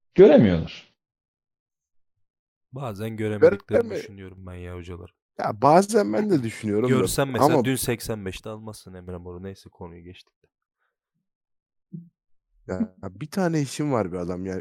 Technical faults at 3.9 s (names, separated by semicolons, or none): one channel drops out